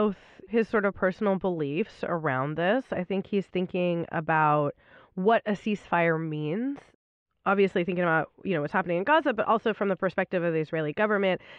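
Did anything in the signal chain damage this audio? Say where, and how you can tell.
No, nothing in the signal chain damaged this audio.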